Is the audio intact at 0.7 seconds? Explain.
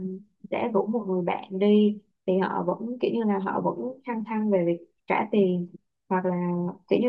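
Yes, the audio is intact at 0.7 seconds, with no fault present at that moment.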